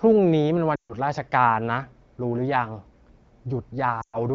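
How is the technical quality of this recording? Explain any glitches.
The recording has two glitches, both lost AMR speech frames. The speech itself is carried by the AMR wideband (HD Voice) codec, whose clarity points to a rate of about 12.65 kbit/s or more with only light codec damage.

Lost AMR speech frames, from 0.75 to 0.95 s and from 4.01 to 4.18 s. Radio errors corrupt frames, and the decoder stands in for each missing one by repeating the last good pitch and vocal tract settings at a falling level. The first gap lasts 140 ms and the second 120 ms, which fits runs of seven and six 20 ms frames. In each, the speech drops to near silence within two frames before the signal returns, briefly weak or rough.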